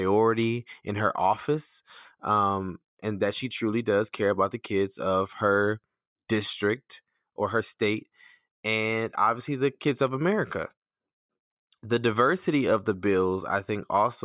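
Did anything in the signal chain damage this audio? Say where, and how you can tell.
No, nothing in the signal chain has damaged this speech recording. No stage between capture and playback leaves any audible trace on the signal.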